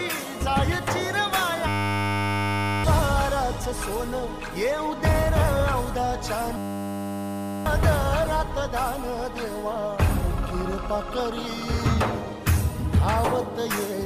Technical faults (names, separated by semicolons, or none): system hang loop